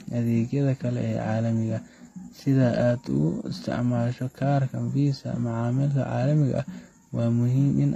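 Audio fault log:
Throughout: transcoding between lossy codecs. Content stops at 14.9 kHz, and two layers of coding damage sit on top of each other: the thin, metallic top end of a low-rate spectral-replication codec, plus the smeared pre-echo and swirly quantisation noise of MP3. This likely comes from a low-bitrate HE-AAC encode re-encoded to a modest MP3. The second encoder spends its bits reproducing the first encoder's artefacts, so both sets remain audible together.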